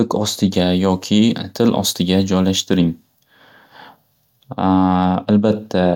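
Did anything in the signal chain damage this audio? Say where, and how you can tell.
Yes. From 0.54 s to 2.77 s the speech turns thin, bright and hissy on sibilants, which is pre-emphasis left on. The treble is raised by about 10 dB at 10 kHz relative to 1 kHz, a slope that fits a 50 µs FM pre-emphasis curve. The fault sits in the transmission path. The boost applied before sending was never undone by the matching de-emphasis cut on the receive side, so the high end stays lifted for that stretch.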